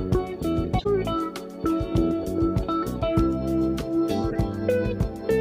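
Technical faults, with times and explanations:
0.78 to 0.86 s and 4.30 to 4.35 s, corrupt frame decoded: two short bursts of wrong spectral content, each a brief chirp or noisy blip lasting about 80 ms and then 56 ms. Damaged bits in the compressed stream led the decoder to misread gains and codes, so energy appeared at the wrong frequencies. Each burst spans a few frames' worth of time. The first peaks near -15 dBFS and the second is quieter, around -20 dBFS.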